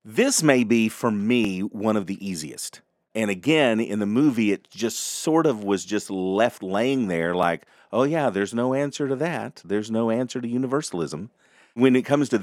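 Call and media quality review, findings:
Repeated buffer: brief click at 1.45 s after "may be for" and at 7.43 s after "just left laying there". Playout underrun replayed the last 2.67 ms block once, which fits a 128-sample buffer. Waveform shows a duplicated segment with a hard seam; spectrogram shows a thin vertical broadband line.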